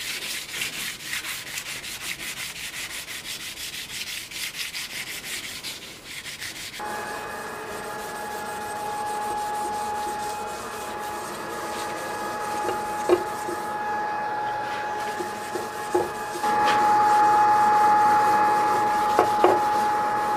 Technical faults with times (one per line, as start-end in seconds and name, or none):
none